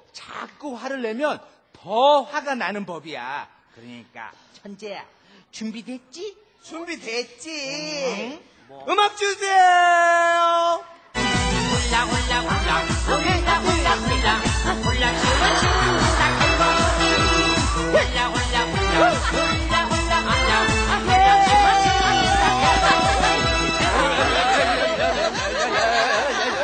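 From 20.68 to 23.70 s a train of clicks, around fifteen similar pops at about 4.3 per second, irregularly spaced and about 10 dB above the sound, likely from electrical interference.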